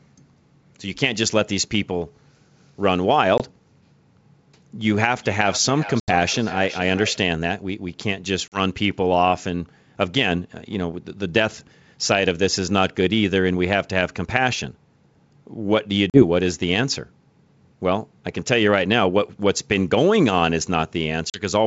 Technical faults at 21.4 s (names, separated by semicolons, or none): packet loss on an ADPCM call